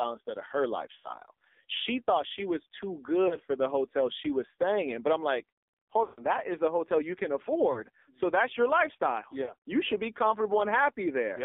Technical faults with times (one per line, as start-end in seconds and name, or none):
0.00-11.45 AMR narrowband mobile codec
0.96-1.11 lost AMR speech frames
3.28-3.36 lost AMR speech frames
6.04-6.25 lost AMR speech frames
7.72-7.83 lost AMR speech frames
9.44-9.53 lost AMR speech frames